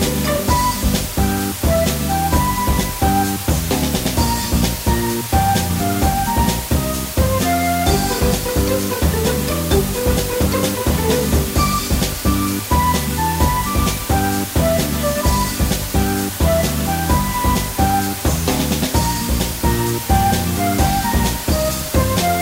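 From start to finish there's low bit depth with dither: a constant, even hiss sits only around 10 dB under the sound, which fits a 4-bit signal. Dither before rounding turned the quantisation error into steady white noise instead of distortion.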